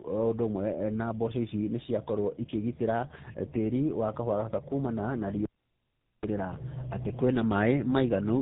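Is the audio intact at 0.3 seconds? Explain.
No. Tandem speech coding runs throughout: two low-rate speech coders in series, consistent with AMR-NB then GSM full rate, leave the speech rough and warbly, with nothing above 3.7 kHz.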